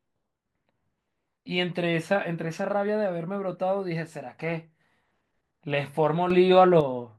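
At 6.30 s the speech and its background noise step up together by about 7 dB, staying raised until 6.81 s, when they drop back just as abruptly. This sudden gain jump is likely the result of a digital gain change applied from one sample to the next with no ramp. On the waveform the envelope shows a hard rectangular step at both edges. On a spectrogram the whole band, noise floor included, brightens uniformly for that half second.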